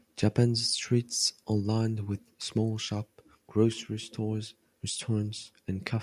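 No technical faults can be heard anywhere here.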